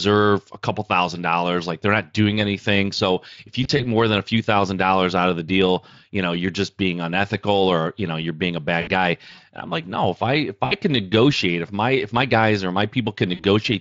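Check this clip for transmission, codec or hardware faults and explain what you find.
Four short dropouts are audible in the speech, all of the same kind, heard over the light texture of the Speex coding.

VoIP packet loss concealed by the speech codec occurs at 3.63 to 3.86 s (about 60 ms of audio missing in brief gaps of up to 20 ms, scattered over 160 ms), 8.81 to 8.90 s, 10.65 to 10.75 s (about 60 ms each) and 13.35 to 13.44 s (about 40 ms). With packets missing, the decoder repeats its last pitch and vocal-tract shape at falling gain, so the speech smears into a brief buzzy tone or coloured noise that fades, and sounds weak for a moment after packets return.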